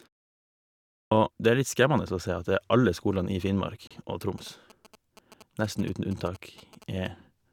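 At 1.06 s, a clipped start after a pause: the output device wakes late from the preceding second of silence, so about 55 ms of speech onset is swallowed, unlike a smooth mute-and-restore fade. At 3.87 s, a gap between stream segments leaves a hard-edged 33 ms hole of silence, consistent with 4 s segment boundaries; nothing is lost, unlike a dropout. From 4.38 s to 7.07 s, GSM signalling bursts from a nearby phone add a galloping dit-dit-dit of short 217 Hz buzzes, roughly 20 dB below the speech, distinct from steady mains hum.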